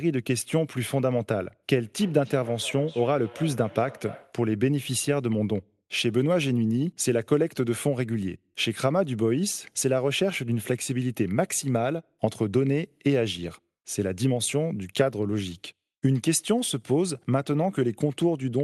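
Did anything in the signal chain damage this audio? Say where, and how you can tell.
Yes, at the call-processing stage: a feedback echo between two devices. From 1.75 s to 4.44 s the speech returns at a fixed interval of roughly 0.3 s, thinner and more ringing, peaking about 18 dB below the direct speech. A second device in the same room replayed this call, and its microphone fed the sound back in. The local echo canceller ignored it because it only subtracts its own playback.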